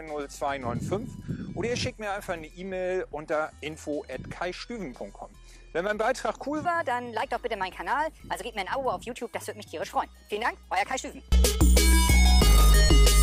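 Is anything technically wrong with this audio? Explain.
Yes, two faults are audible. Throughout, the sound is dull and gurgling, likely from MP2 compression at a rate that fits about 80 kbps: starved upper sub-bands drop out, showing as flickering gaps above a ragged ceiling on a spectrogram. From 6.65 s to the end, a section at the wrong speed plays 1.25 times too fast, raising pitch by roughly four semitones; harmonics jump upward on a spectrogram and waveform events bunch closer together.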